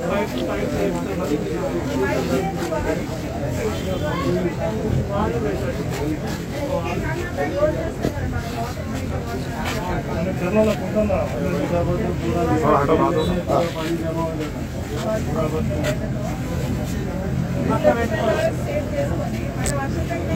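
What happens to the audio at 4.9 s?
At 4.9 s the audio carries channel delay (comb filtering), which runs through the whole clip rather than starting there. One channel lags the other by roughly 20 ms, and summing them to mono cancels shared content at evenly spaced frequencies, the first notch sitting around 20 Hz. The result sounds rough or slightly doubled. On a spectrogram this shows as closely spaced, fixed horizontal dark stripes running unchanged across the entire timeline.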